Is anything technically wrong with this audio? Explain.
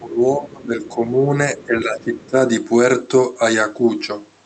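Yes. From 0.0 to 1.33 s and again from 1.57 to 2.36 s, the speech dips by around 15 dB, which is likely speech suppressed in double talk by an echo canceller. Between 2.19 and 2.3 s, the other side's voice leaks through as a brief, faint scrap far below the speech, which the canceller likely failed to remove.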